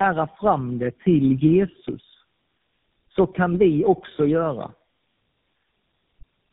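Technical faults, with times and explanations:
Throughout, tandem speech coding. The speech sounds rough, muffled and warbly, with nothing above 3.7 kHz. The artefacts fit three low-rate mobile speech codecs in a row, consistent with two AMR-NB stages and a final GSM full rate stage, joined by plain telephone links. At each border the speech was decoded and coded again. Each coder then worked on damage left by the one before. The losses stack, so it sounds worse than any single coder would.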